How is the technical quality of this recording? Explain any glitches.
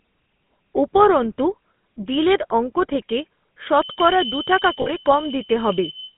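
Quality is poor, with narrowband phone-codec coloration throughout, a whistle in the second half and a brief dropout.

GSM full-rate codec: Across the whole clip, speech is confined to roughly 150 Hz to 3.5 kHz and has a buzzy, gravelly edge, which fits the 13 kbps full-rate coder. It rebuilds the voice from a vocal-tract model driven by sparse pulses. A spectrogram shows a hard ceiling near 3.5 kHz.

Feedback whistle: From 3.67 s to the end, just after "বিলের অঙ্ক থেকে", a thin, steady whistle at 3 kHz sits well below the speech. It is likely a loudspeaker-to-microphone loop held just short of runaway. On a spectrogram it is a single horizontal line, wavering slightly in brightness.

Lost GSM frames: Around 4.82 to 4.89 s, about 40 ms of audio turns into a rough, metallic ring, which fits two missing 20 ms frames. The decoder repeats the last good frame. The waveform shows a short, repetitive stretch.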